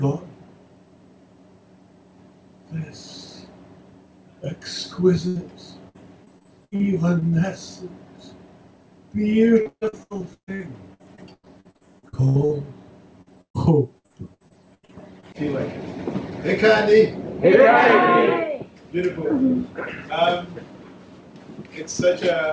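Repeated packet loss (robotic sound) occurs from 5.28 to 7.34 s, 9.62 to 12.52 s and 13.22 to 15.25 s. Holes recur, each patched by stretching the last sound, up to about 0.14 s. This gives a choppy stutter with pieces missing rather than one isolated dropout, above a call-codec band that stops at 8 kHz.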